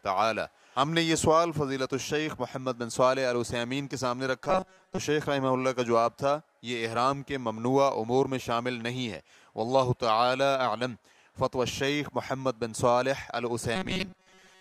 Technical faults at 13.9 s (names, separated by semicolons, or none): robotic sound from repeated short buffers